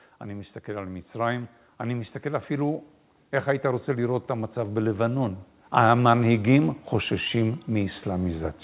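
From 0.24 s to 8.58 s, automatic gain rising lifts the speech and background together by about 16 dB, the gain control steadily raising a level it judged too quiet. The band stops at 4 kHz, consistent with a narrowband call codec.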